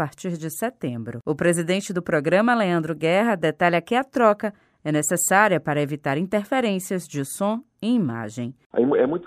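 No technical faults can be heard in this recording at any point.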